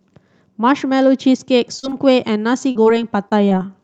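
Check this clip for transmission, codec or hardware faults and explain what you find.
There's one fault here: short concealed packet loss at 1.79–1.85, 1.89–1.93, 2.71–2.77, 2.83–2.87, 3.29–3.33 and 3.49–3.53 s. About 20–40 ms of audio arrived too late each time, and the decoder stretched the previous sound to cover the gap, so you get brief smeary wobbles. The call codec's top end stops around 8 kHz.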